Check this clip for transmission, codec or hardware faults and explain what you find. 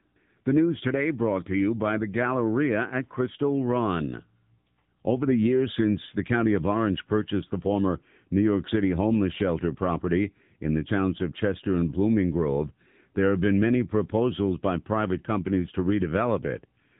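One fault is present: the whole recording has passed through an AMR narrowband mobile codec. Throughout all 17 seconds, the speech was squeezed into the 8 kHz-sampled phone format, which rebuilds the voice from a vocal-tract filter excited by a few pulses per sub-frame. Nothing above 3.8 kHz survives, so sibilants lose their edge and the sound is dull and boxed-in. The damage is plainly audible as a buzzy, synthetic quality, which fits one of the middle modes, around 8 kbps.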